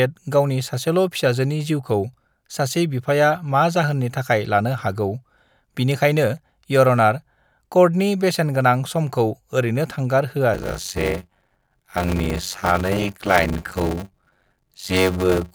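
From 10.53 s to the end, the speech shows a block size mismatch (padded). Each block arrives short and is topped up with zeros. That inserts a 93.8 Hz buzz, fitting a 512-sample read block. Speech slows to 0.625 times speed, with its timbre kept.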